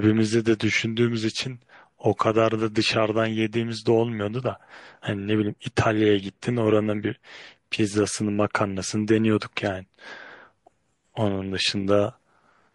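Throughout the speech, plainly audible MP3 compression is likely: the treble stops at a fixed ceiling and weak detail flickers in and out, giving a watery, swirly sound and smeared s sounds, which fits a bitrate near 48 kbps. A spectrogram shows a flat cutoff and patchy holes.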